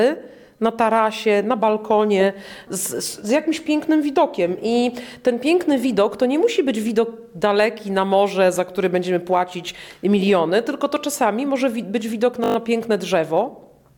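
At 12.44 to 12.56 s the audio shows a system hang loop: a 20 ms slice repeats exactly six times, giving a brief buzz at 50 Hz as the stalled system left the hardware cycling one buffer. Unlike a dropout, nothing goes silent, and essentially no audio is lost.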